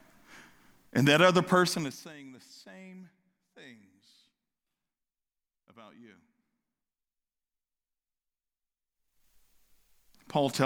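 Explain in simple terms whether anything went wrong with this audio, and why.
The speech has zipper noise twice. From 1.64 to 2.16 s the volume drops, and from 8.88 to 9.28 s it rises. Each change moves in small jumps, about thirty a second, not smoothly. Every jump clicks, so you hear a quick ticking buzz.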